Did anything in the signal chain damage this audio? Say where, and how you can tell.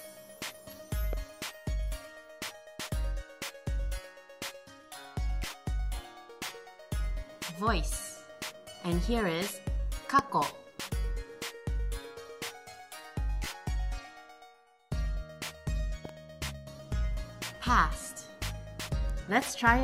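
Yes. Three loud pops sit on top of the audio, which carries on underneath each one: a single sharp pop at 1.13 to 1.15 s, roughly 10 dB above the sound, a harder one at 10.19 to 10.21 s, roughly 20 dB up, and a quick double pop at 16.05 to 16.11 s, around 10 dB up. These brief pulses point to the analogue wiring stage, likely a connector, switch or static discharge adding voltage steps.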